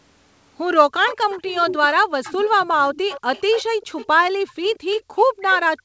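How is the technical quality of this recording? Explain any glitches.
The recording has two call-related faults, both caused by echo cancellation on a loudspeaker call. The sound stops at 8 kHz, which fits a wideband call codec such as G.722.

Echo leak runs from 1.07 s to the end. A faint copy of the speech follows 181 ms behind, about 15 dB down. The canceller on one side likely let the loudspeaker's sound back through.

Background gated by the echo canceller happens at 1.95 to 2.12 s, 3.69 to 4.44 s, and from 5.01 s to the end. The canceller cut the microphone hard while the loudspeaker played, so the room sound drops by about 40 dB, returning after the first two dips.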